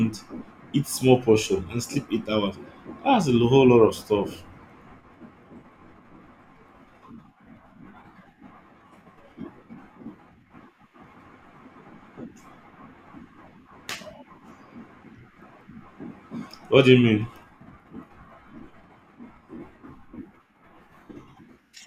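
DAB burbling at 0.96 to 1.02 s, before "portion and sleep eight": sparse reception bit errors corrupt sub-band levels, producing a few watery blips rather than a dropout's silent gap.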